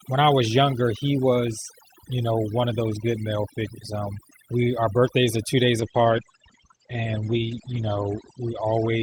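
Overdone noise removal runs through the whole clip. The noise reduction was set far too strong. Frequency bands close to its noise estimate get pushed down hard or switched off. Quiet parts of the speech are removed along with the noise. The background sinks to near silence with small twinkling specks. This holds from start to finish.

A call bitrate drop begins at 5.82 s, right after "birthdays are two days", and lasts to the end. The call's bandwidth estimate fell, so the encoder got far fewer bits. The sound suggests a fall from around 32 kbps to about 12 kbps. The coding turns coarse and rough. The top end is cut from 20 kHz down to 8 kHz, which muffles the voice. The worst stretch lasts about 2.01 s.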